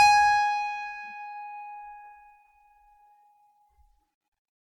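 Throughout the music there is generation loss: a swirly, hollow, smeared texture with blurred attacks. It is worse than a single low-bitrate pass would give, so it likely comes from repeated MP3 coding near 96 kbit/s, around seven times, with the artefacts compounding at each pass.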